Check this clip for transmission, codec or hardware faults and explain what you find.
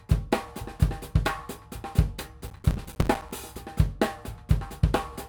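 There's one fault here: a stretch of processor overload crackle from about 2.48 s to 3.31 s. For that span the processor couldn't keep up with its small audio buffers. The gaps sound like short chunks of roughly 5 ms, and dozens of deadlines were missed again and again. Each miss drops in a hard-edged bit of silence, so the sound gets chopped into a gritty, tearing crackle that stops cleanly once the load eases just after 3.3 s.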